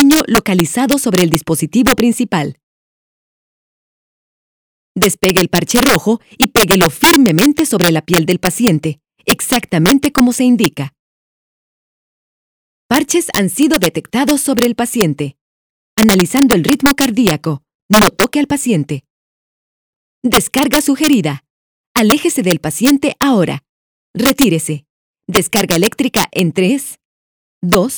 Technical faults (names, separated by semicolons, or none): integer overflow